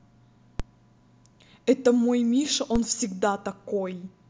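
At 0.60 s and again at 2.76 s there's a DC step: the waveform's zero line jumps by about -16 dBFS, giving a low thump while the speech carries on, then bleeds away as a 20 Hz high-pass pulls it back.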